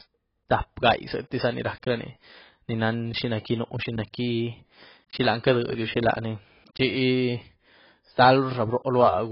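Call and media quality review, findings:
Throughout: dull, band-limited speech, nothing above 5.5 kHz, warbly smeared sibilants. Likely AAC compression at a low bitrate, around 16 kbps; heavy quantisation leaves spectral holes and a lowered cut-off.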